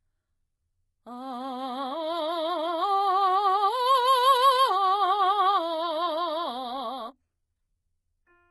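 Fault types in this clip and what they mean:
HE-AAC compression: likely low-bitrate HE-AAC, heavy damage; rebuilt treble sounds gritty and metallic, and a spectrogram shows copied, smeared upper bands stopping sharply near 11.8 kHz.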